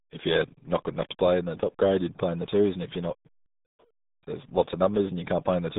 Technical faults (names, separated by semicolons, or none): RealAudio 14.4 codec